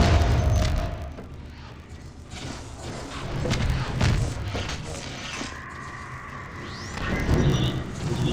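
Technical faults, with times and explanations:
Throughout: filter restarted on every block. The filter loses its memory at each block boundary and begins again from silence, so each block opens with a small transient. These repeat at 50 Hz, a block every 20 ms, producing a steady buzz that rises and falls with the sound's level. On a waveform, tiny regular discontinuities appear every 20 ms; a spectrogram shows faint vertical striations and a comb of harmonics at multiples of 50 Hz.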